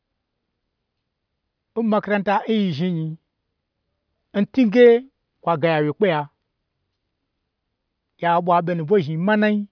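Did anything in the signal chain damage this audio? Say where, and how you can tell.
No, none of the stages between capture and playback has left an audible mark on this speech. Nothing in the recording points to a problem at any one point in the chain.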